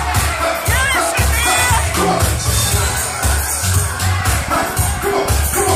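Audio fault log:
4.06 to 5.69 s, train of clicks: a steady ticking runs over the sound near the end, about 14.3 clicks per second at an even spacing, around twenty in all, each of much the same sharp shape and peaking roughly as loud as the sound itself, so they stay plainly audible. Near-identical pulses arriving at a fixed rate point to something periodic breaking into the signal, likely interference from nearby equipment or a faulty connection or power supply.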